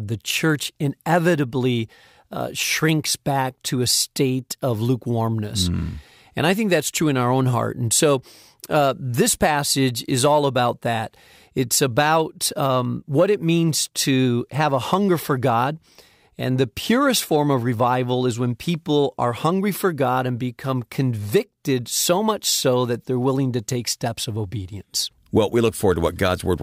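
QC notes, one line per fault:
Nothing stood out on listening to the speech, so there is nothing to log.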